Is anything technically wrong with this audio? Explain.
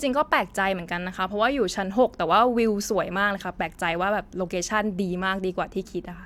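No, nothing is technically wrong with this audio.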